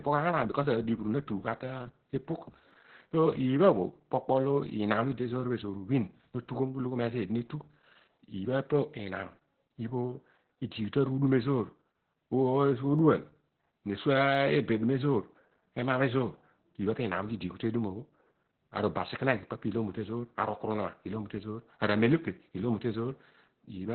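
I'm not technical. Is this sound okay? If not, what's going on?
No. Two things are wrong with this speech recording.

The whole clip has heavy Opus voice compression. To shrink the file, the voice coder kept only a narrow band of sound, with nothing above about 4 kHz. It also rebuilt the voice roughly. That is why the speech sounds muffled, like an old phone line, and also hoarse and slightly robotic. A plain treble cut would only dull the voice. This coding roughness makes the voice itself sound synthetic.

There are also two sharp clicks from dropped samples, at 2.71 s and 14.35 s. At each point the recording likely skipped a tiny sliver of audio, a small fraction of a millisecond, so the sound jumps abruptly and snaps. Unlike a dropout, no sound goes missing and nothing stutters. You hear only a single quick tick.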